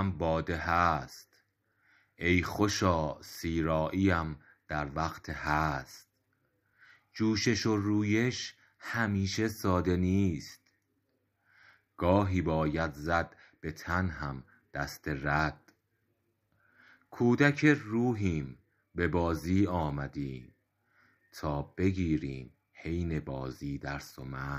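No technical faults can be heard anywhere in the recording, so the signal reaches the listener intact throughout.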